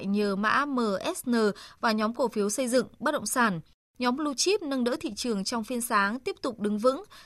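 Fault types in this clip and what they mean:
No technical faults detected.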